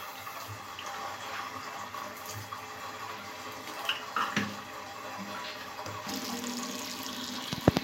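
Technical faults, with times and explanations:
No technical faults can be heard anywhere in this recording of sounds; the signal stays continuous and stable throughout.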